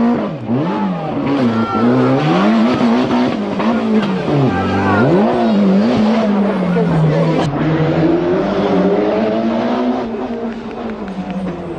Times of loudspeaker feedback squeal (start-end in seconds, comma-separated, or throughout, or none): none